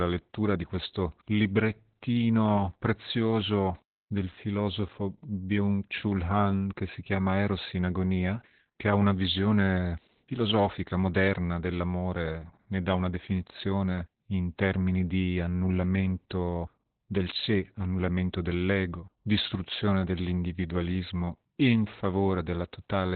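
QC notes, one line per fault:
Throughout, Opus voice compression: the speech is heavily damaged, with nothing above about 4.4 kHz, so it's muffled, hoarse and a bit robotic. That points to the SILK coder squeezed to narrowband at a very low rate, around 8 kbps, coding the excitation coarsely.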